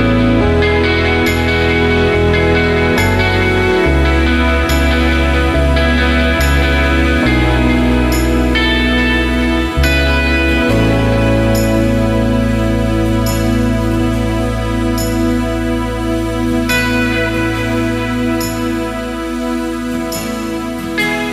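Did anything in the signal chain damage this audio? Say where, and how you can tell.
No, nothing in the signal chain audibly damaged this audio. No stage, from the wiring through to playback, leaves a mark that can be heard.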